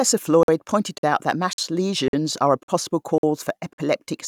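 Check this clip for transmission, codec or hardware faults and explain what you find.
The speech has one fault, a gap between chunks. Seven 50 ms silent holes start at 0.43, 0.98, 1.53, 2.08, 2.63, 3.18 and 3.73 s. The sound arrives in 0.5 s chunks, and each join is left empty.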